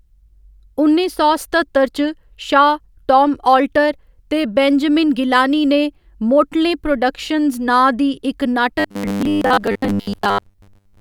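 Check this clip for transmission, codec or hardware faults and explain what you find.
One fault is present: robotic sound from repeated short buffers, 8.79 to 11.00 s, likely from audio arriving too seldom, so roughly 10 ms segments repeat for most of that stretch, imposing a rigid, metallic 100 Hz buzz on the speech.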